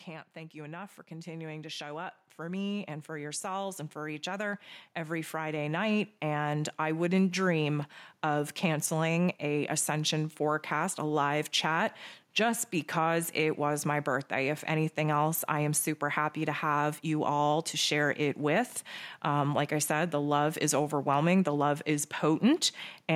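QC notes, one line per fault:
0.33–7.08 s, automatic gain rising: the level climbs steadily by about 14 dB over nearly seven seconds, with voice and background noise swelling together, because the automatic gain control judged the input too quiet and kept raising its gain.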